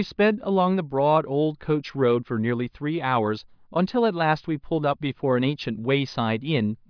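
Speech recording with no audible technical faults.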